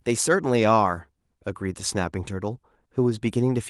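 No technical faults can be heard anywhere in this speech recording. Nothing in the audio stands out as a problem at any moment.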